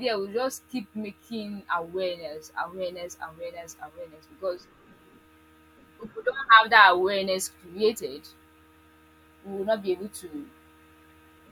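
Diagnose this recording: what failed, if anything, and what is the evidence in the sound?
Codec stage: compressed frames skipped at 7.91–8.00 s. Around 70 ms of speech jumps ahead.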